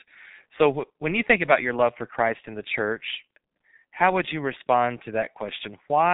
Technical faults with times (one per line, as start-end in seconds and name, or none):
0.00-6.14 G.723.1 codec